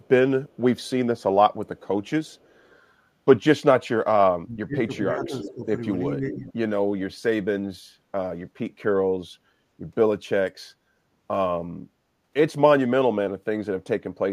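Faint echo leak appears at 0.03–0.08, 0.49–0.9, 1.66–1.81 and 2.31–2.72 s. It is a copy delayed 373 ms, about 40 dB down, likely from an echo canceller missing loudspeaker pickup.

From 4.43 to 5.64 s, speech is suppressed in double talk. Level dips by about 25 dB for roughly a second, likely because the canceller mistook talker for echo.

Louder echo leak follows at 5.23–5.52 s, about 15 dB down. Another suppression dip of about 10 dB runs 6.07–6.46 s. Echo returns at 6.29–6.53 s, about 20 dB down.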